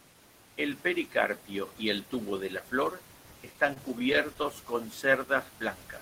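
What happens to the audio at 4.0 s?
At 4.0 s the audio is in a stretch of repeated stalls (stutter), from 3.53 to 4.46 s, just after "tubo de la flor". Packets arrived late, draining the jitter buffer twelve times. Each gap, the longest 23 ms, was filled by continuing the preceding sound, so nothing is lost but delivery drags and stutters.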